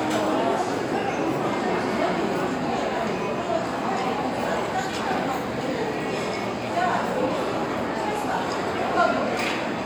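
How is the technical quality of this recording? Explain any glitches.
The recording comes through without any audible technical faults or glitches.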